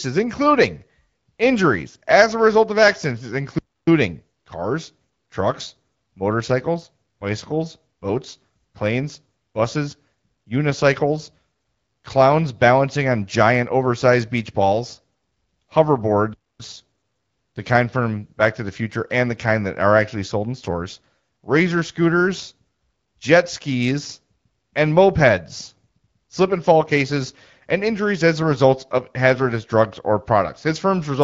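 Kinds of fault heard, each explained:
Playback stall: The player likely ran short of data or had its output thread blocked, so nothing reached the speaker until it caught up. The speech cuts out mid-flow twice, for about 0.29 s at 3.58 s and 0.26 s at 16.34 s.
AMR bit errors: On a weak link, flipped bits in the less protected parts of the AMR-WB frames got past the checksum, misplacing excitation pulses and skewing gain and spectral values. Around 28.41 s, a roughly 50 ms burst, consistent with two damaged frames, turns the speech briefly hoarse and gargly.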